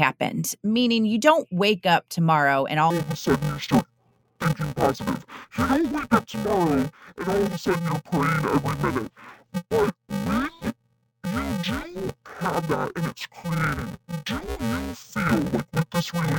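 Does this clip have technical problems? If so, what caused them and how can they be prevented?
Yes. Interleaved audio read as planar, from 2.90 s to the end: 128-sample blocks (2.9 ms) have alternating left-right samples split into halves instead, so speech turns dull and robotic with a buzz at about 345 Hz. Prevent it by declaring the buffer's channel layout correctly when handing audio between components.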